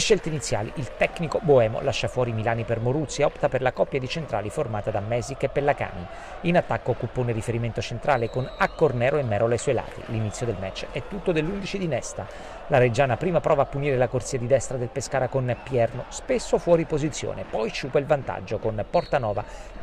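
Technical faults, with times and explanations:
No technical faults are audible anywhere in the recording.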